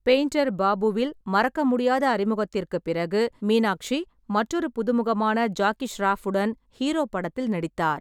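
No technical faults can be heard anywhere in the recording.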